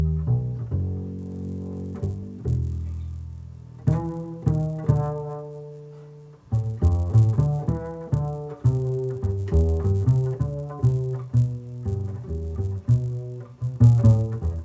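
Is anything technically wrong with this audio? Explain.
Yes. From 1.19 s to the end, a resampler restarted on every block converts 24 kHz to 16 kHz in isolated 10 ms chunks, leaving edge errors that buzz at 100 Hz wherever sound plays. A spectrogram shows harmonic lines at 100 Hz intervals, and the waveform shows small discontinuities every 10 ms.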